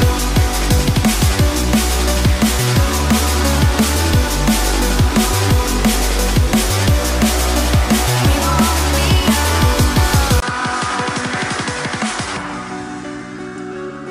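At 10.40 s the sound drops out for about 20 ms and then returns narrower and a few decibels quieter through to the end at 14.11 s, which points to the input likely having switched to a poorer device. Everything above 10.5 kHz is gone, so the top loses its air and turns duller. A new background noise floor sits roughly 30 dB under the signal. On a spectrogram the upper band cuts off abruptly at the gap, and the waveform shows a brief flat notch followed by a visibly smaller envelope.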